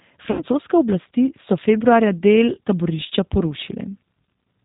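Throughout, the audio shows plainly audible damage from the G.729 codec. Nothing above 4 kHz survives, and the speech sounds slightly rough and synthetic. That fits an 8 kbit/s G.729A stream, which rebuilds speech from a vocal tract filter, a pitch predictor and sparse pulses.

From 0.31 to 0.43 s, just before "oblasti so februarja", there is VoIP packet loss concealed by the speech codec. About 80 ms is missing, which fits four lost packets. The decoder stretches the last sound into a buzzy tone or coloured noise that fades. A second, shorter dropout follows at 2.55 to 2.58 s, with 20 ms missing, which fits one lost packet. Recovery is weak there.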